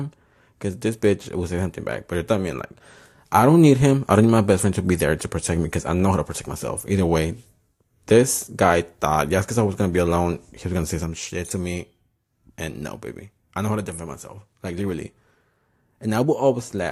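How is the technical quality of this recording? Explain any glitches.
No technical glitches can be heard anywhere in this recording. Nothing in the speech points to a fault in how the audio was captured, stored or played back.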